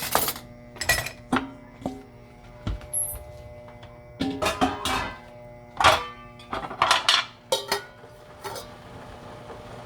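No technical faults are audible anywhere in this recording of sounds.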